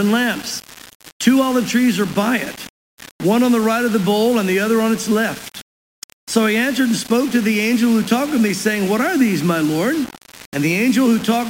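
From start to finish the sound carries grainy distortion that moves with it, most likely low bit depth without dither: rounding to about 5 bits leaves error roughly 20 dB below the signal. Unlike steady hiss, this grit follows the audio.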